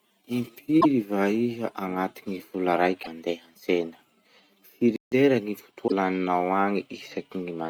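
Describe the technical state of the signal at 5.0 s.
At 5.0 s the speech is in a playback stall: output drops to silence from 4.96 to 5.12 s, about 160 ms, then resumes. The player likely ran out of buffered data. The waveform shows a flat silent gap, the spectrogram a blank vertical band.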